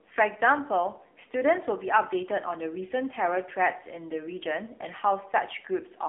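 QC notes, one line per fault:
Throughout: AMR narrowband mobile codec. The speech sounds thin, boxy and buzzy, with a synthetic edge and no air or sibilant sparkle above about 3.7 kHz. The line band runs from roughly 250 Hz to 3.5 kHz. The codec rebuilds each 20 ms frame from a vocal-tract model fed by a handful of pulses, and the plainly audible coarseness fits one of AMR-NB's lower modes, around 7.4 kbps.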